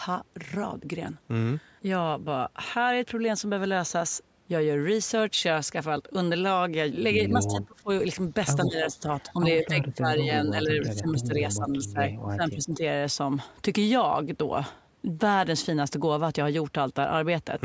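From 7.33 to 7.89 s the speech dips by as much as about 25 dB for a few tenths of a second in total. That's speech suppressed in double talk, most likely an echo canceller that couldn't separate the near talker from loudspeaker echo and pulled everything down. Inside that stretch, 7.46 to 7.62 s, there's an echo leak: a delayed copy of the speech arriving 185 ms late at about 15 dB below the direct sound, the canceller likely having let some of the far side's playback through.

The same pattern returns at greater length from 8.64 to 12.82 s, where the level keeps dropping, by up to about 20 dB, for roughly three seconds altogether, so the talker sounds ducked and patchy. Short echo scraps, again 185 ms behind, slip through at 9.3 s (about 35 dB down), 10.2 s and 10.82 s (both about 25 dB down), each only a few hundredths of a second long.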